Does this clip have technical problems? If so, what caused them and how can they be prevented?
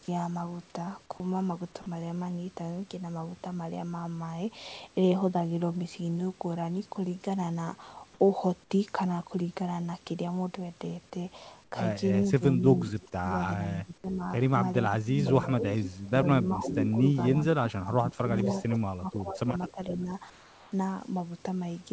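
Yes. At 1.82 to 1.86 s, 40 ms of sound gives way to steady comfort noise, and 20 ms of speech is lost. A voice detector likely misjudged the sound as background and stopped sending. Tuning the detector to be less aggressive, or adding hangover time, prevents this.

At 11.64 to 11.72 s and 20.30 to 20.72 s, the real background turns into flat, featureless hiss, about 6 dB and 4 dB quieter. This is likely discontinuous transmission filling pauses with comfort noise. Disabling discontinuous transmission keeps the real background.

From 12.24 to 14.23 s and 14.88 to 20.11 s, the speech dips and breaks up, at worst by roughly 20 to 25 dB. This is speech suppressed in double talk, likely because an echo canceller turned down both sides while the other party spoke. A better double-talk detector, or a headset on the far end, prevents this.

At 15.84 to 16.06 s, 16.63 to 16.91 s and 18.14 to 19.96 s, a delayed copy of the speech returns 475 ms later, roughly 10 to 15 dB below it. 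This echo leak likely comes from a loudspeaker whose echo canceller left residue. Using headphones, or lowering speaker volume, prevents it.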